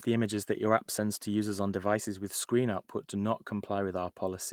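No technical faults can be heard in this speech.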